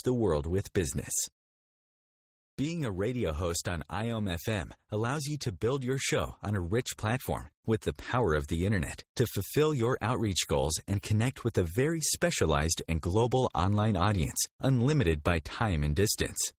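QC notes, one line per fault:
Throughout, Opus voice compression: the speech has that coarse, slightly hoarse and robotic grain of a low-rate voice codec, plainly audible the whole way. The lower band sounds like a linear-prediction coder with its excitation squeezed, while the top end above 8 kHz is kept but rendered thinly by a transform layer. That mix points to Opus in hybrid mode at around 16 kbps, enough to keep the full band but not the detail within it.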